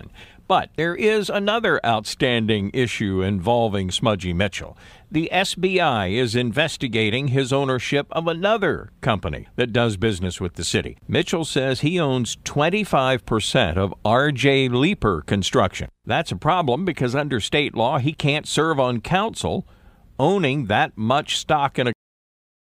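The final buffers of this speech recording were never written out, leaving a cut-off end: at 21.93 s the speech stops mid-sound and drops straight to digital silence with no natural decay, and that dead silence holds for the remaining 0.7 s or so.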